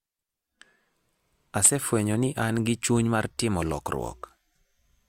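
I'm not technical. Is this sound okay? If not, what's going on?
Yes, no technical faults are audible anywhere in this speech recording.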